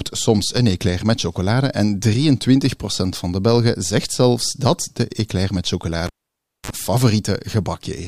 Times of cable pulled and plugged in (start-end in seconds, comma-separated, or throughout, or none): 6.06-6.70